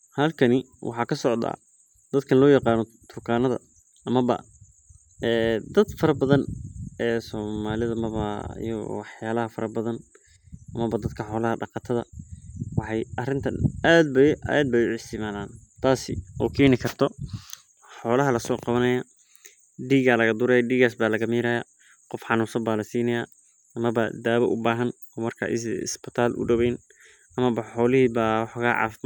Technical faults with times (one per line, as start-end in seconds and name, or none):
none